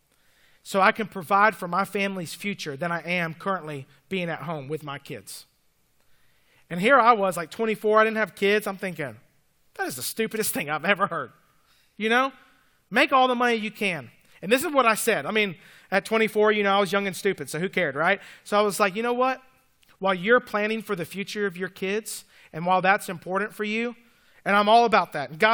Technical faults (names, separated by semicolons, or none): none